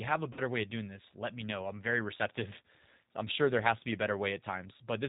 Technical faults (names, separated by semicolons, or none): G.729 codec; VoIP packet loss concealed by the speech codec